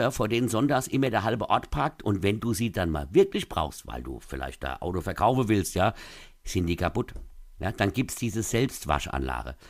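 Two sharp, isolated clicks interrupt this speech recording, at 1.07 s and 5.76 s. Each is most likely dropped samples: a tiny stretch of the stream, well under a millisecond, goes missing, so the waveform jumps abruptly to a later value. That step shows as a thin vertical line across the spectrum. A dropout would leave an audible gap in the sound; here the loss is far too brief to remove anything.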